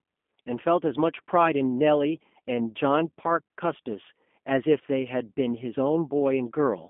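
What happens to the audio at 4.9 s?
At 4.9 s the speech carries G.729 codec damage, as it does across the whole clip rather than at that instant alone. The sound is rebuilt from a vocal tract filter, a pitch predictor and a few coded pulses per frame, which fits an 8 kbit/s G.729-type stream. Nothing above 3.5 kHz survives, and the voice sounds plainly rough and synthetic. A simple telephone band filter (200 Hz to 3.4 kHz) would narrow the sound but keep it natural. This roughness comes from the codec's model instead.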